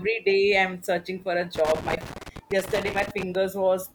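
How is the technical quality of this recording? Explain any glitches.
From 1.55 s to 3.35 s the speech is broken up by an irregular burst of crackle and scratching rather than a steady noise. This is loose connector crackle. A worn or dirty contact somewhere in the signal chain was shifting, so the connection kept making and breaking. Each break chopped the signal for an instant, and any DC present on the line turned those transitions into clicks and pops.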